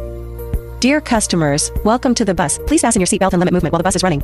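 From 2.34 s onward, the audio turns abruptly rushed at double pace with unchanged pitch: a time-stretched section, likely squeezed by dropping slices.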